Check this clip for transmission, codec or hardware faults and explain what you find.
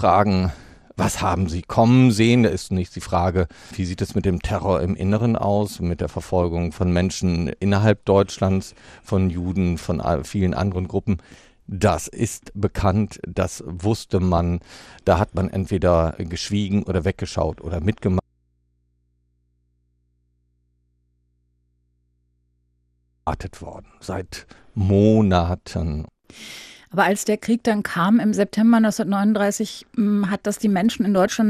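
Three kinds of fault are present in this speech: codec damage throughout, four bursts of DAB burbling, and one long dropout leaving only hum.

MP2 compression runs the whole way through: a dull top end with a gurgling, granular texture as upper sub-bands flicker in and out. That points to MPEG Layer II at a low rate, likely around 80 kbps. Unlike burbling, it is constant rather than bursty.

DAB burbling occurs at 5.13 s, 14.17–14.38 s, 16.93–16.97 s and 31.17–31.27 s. Bit errors at a small fraction of a percent slip past error correction and corrupt sub-band samples and scale factors. Single bands jump for a frame, giving short noise blips that are brief and isolated, not steady codec grain.

An audio dropout to a faint residue runs from 18.20 s to 23.27 s, about 5.1 s. The signal vanishes abruptly, leaving mains hum about 45 dB down, likely from a lost input feeding a still-live chain. 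The hard edges and hum distinguish it from a pause or fade.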